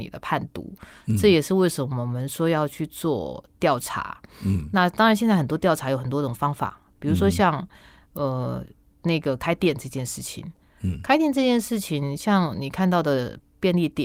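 No technical faults occur at any point in this speech recording.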